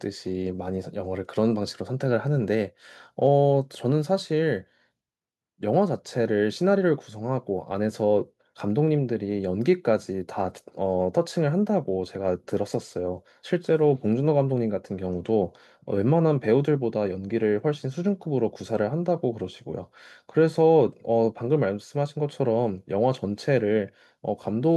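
No technical faults are audible anywhere in this speech recording.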